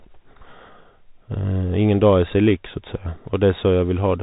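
Speech here, squeezed through a Bluetooth CVSD headset codec from start to finish: nothing gets past about 3.8 kHz, so s sounds come out scratchy over a grainy hiss, and loud bright bits distort where the one-bit step can't keep up.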